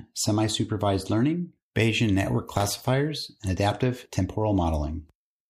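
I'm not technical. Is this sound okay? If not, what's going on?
No. From 2.55 to 2.88 s, just before "and adaptive", the speech breaks into a gritty crackle. This is processor overload crackle: the computer fell behind, so dozens of tiny audio chunks, each apparently under a millisecond long, dropped out as silence.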